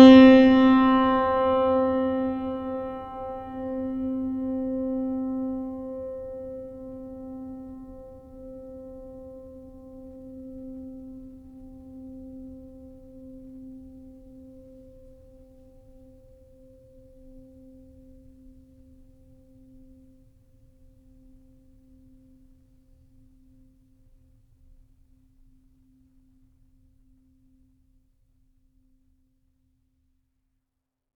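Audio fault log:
No faults found; the music signal runs continuously across the whole recording.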